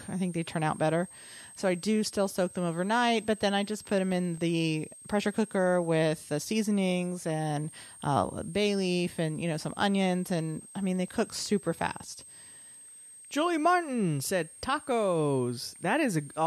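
A high, thin whistle sits under the speech for the whole clip, wandering between about 8.3 and 8.8 kHz at roughly 20 dB below the voice. This is switching supply whistle: a switching power supply is running in an audible burst mode or beating with another one, and its pitch drifts as its load shifts.

From 4.00 to 4.62 s, between "then I just put" and "pressure cooker with the", six quick ticks arrive at a steady rate of about eight a second, the longest around 2 ms. A second run of six ticks, each up to about 1.5 ms, follows from 10.96 to 11.59 s, just after "onions and I mean". These are CD scratch ticks. A blemish on the disc corrupts more data on each revolution than error correction can repair, so the player patches or briefly mutes the damaged samples, producing a regular pulse of small clicks.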